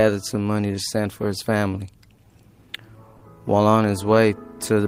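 Clock drift between sender and receiver runs through this audio, with the sender's clock roughly 3% slow, so the jitter buffer keeps draining rather than suffering isolated network losses. Repeated timing corrections from 0.34 to 4.81 s play the stream at 98% speed, adding about a tenth of a second overall; unlike a single glitch, these small stretches recur unevenly throughout. A short stall from a late packet at 3.17 to 3.23 s holds the sound for 40 ms, then resumes where it left off, with nothing missing, which separates it from a dropout.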